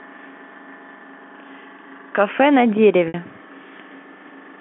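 At 3.08 s, about 60 ms of the speech stream failed to arrive, a gap that fits three lost 20 ms packets, and the receiver covered it with packet loss concealment using pitch repetition. It looped the last pitch period of the voice through the hole until 3.14 s. The sound holds briefly on a slightly buzzy, sustained tone before normal speech resumes, heard through the 200 Hz to 3.4 kHz telephone band of the G.711 line.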